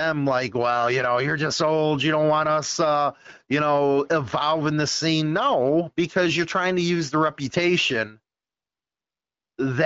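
Nothing in this recording sounds faulty.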